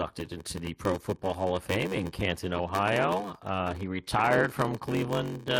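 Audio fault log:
Throughout: block size mismatch (padded). Each 512-sample block ends in a zero-filled gap, giving a 93.8 Hz buzz. Speech runs at 0.861 speed, timbre unchanged.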